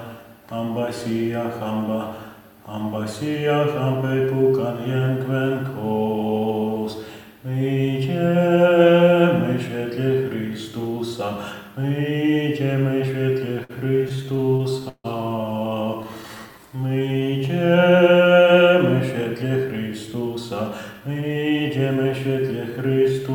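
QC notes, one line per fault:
13.29–15.06 s, repeated stalls (stutter). Packets arrived late, so the jitter buffer ran dry 15 times. Each gap was bridged by continuing the last sound, about 340 ms in total, the longest 153 ms. Nothing is lost, but the audio drags and stutters.
15.85–17.39 s, jitter buffer slow-down. The buffer needed a reserve, so single pitch periods were repeated many times. This adds 177 ms and plays at 89% speed. Pitch holds steady while sounds stretch out.
19.45–20.37 s and 20.93–22.57 s, jitter buffer speed-up. Excess buffered audio was trimmed by cutting short pitch-period pieces. About 70 ms, then about 150 ms, are removed, giving 107% and 109% speed. Pitch is unchanged, but the audio sounds hurried.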